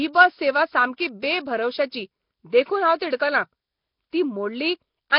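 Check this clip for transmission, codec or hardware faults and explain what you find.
One codec fault runs through the whole speech clip. Nellymoser compression is the likely cause: a low-rate coder spends a fixed two bits per sample on short blocks, so weak bands get no bits and are refilled with noise. The damage is heavy. Speech sounds rough and hissy, smeared and underwater, with nothing above 5.3 kHz, which fits a rate around 22 kbps.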